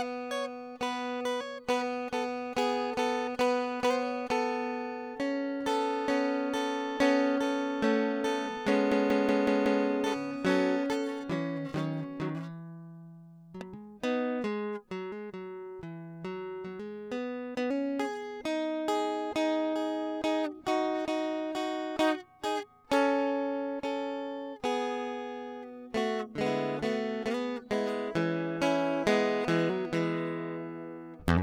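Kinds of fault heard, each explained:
System hang loop: from 8.92 to 9.85 s the music stutters like a machine gun, one 186 ms fragment repeating five times at 5.38 per second. The computer or driver froze while the sound hardware kept cycling through its ring buffer, which fits an 8192-sample buffer.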